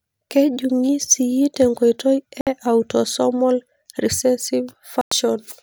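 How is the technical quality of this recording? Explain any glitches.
There are two short gaps where the speech cuts out entirely, at 2.41 to 2.47 s (58 ms, right before "e autosomal") and 5.01 to 5.12 s (about 102 ms). They're likely Bluetooth dropouts: packets missed their deadline, so playback went silent with abrupt edges or a fade of a few milliseconds, then picked up mid-stream as though it had kept going.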